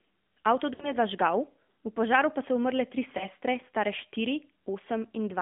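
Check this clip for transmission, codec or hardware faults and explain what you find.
Two faults are present: AMR narrowband mobile codec damage across the whole clip, and lost AMR speech frames at two points.

AMR narrowband mobile codec, throughout: the speech is confined to roughly 200 Hz to 3.5 kHz. The codec rebuilds it from a vocal-tract model excited by sparse pulses, giving a plainly audible buzzy, synthetic quality that points to a mid-rate mode near 10 kbps.

Lost AMR speech frames, 0.74 to 0.94 s and at about 3.2 s: the first gap, just before "zažgal v požaru pa", spans about 60 ms of concealment, consistent with three consecutive lost 20 ms frames. The decoder repeats the last good pitch and filter settings at falling gain, so the sound drags and fades before speech returns rough. The second, just after "pa so umrle tri", covers a single 20 ms frame and is heard as a brief dip.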